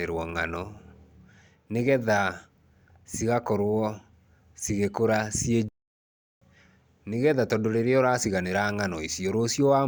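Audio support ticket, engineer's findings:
Playback stall, 5.69–6.42 s: speech cuts to silence for about 0.73 s right after "cigĩkũra ciĩ". Likely cause: player buffer underrun or blocked playback thread, output held silent until data resumed.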